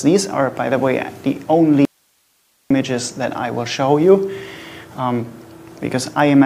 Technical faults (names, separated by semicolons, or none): audio dropout to a faint residue